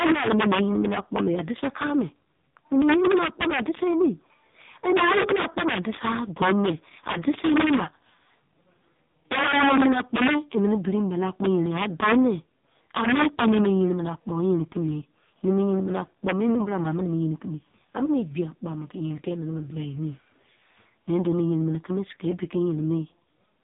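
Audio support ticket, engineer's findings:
Integer overflow, whole clip. Violent cracks on loud speech peaks, far harsher than clipping. Level driven about 10 dB past full scale; a small share of samples, roughly 2%, wrap to the opposite sign instead of limiting. Probable gain stage lacking saturation.

AMR narrowband mobile codec, whole clip. Buzzy, synthetic speech, nothing above 3.8 kHz. Vocal-tract model with sparse pulse excitation per 5 ms; heavy damage points to a low AMR-NB mode, around 5.15 kbps. Probable mobile call leg.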